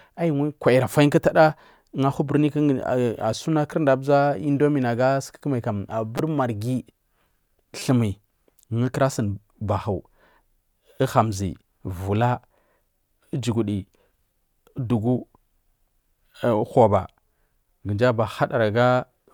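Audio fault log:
6.18 s and 7.79–7.81 s, repeated buffer: new audio arrived late, so the same tiny slice of speech replayed several times with a hard join at each repeat. That gives a brief buzz, fitting a buffer of about 5 ms. About 15 ms and 20 ms of audio are lost.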